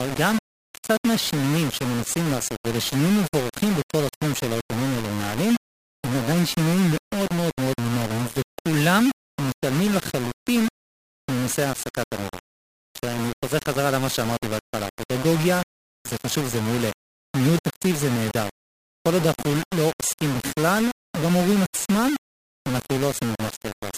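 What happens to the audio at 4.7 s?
At 4.7 s the speech is gritty and grainy, as it is throughout, with distortion that tracks the sound and sits only about 10 dB down. That's likely low bit depth without dither: rounding to 4 bits.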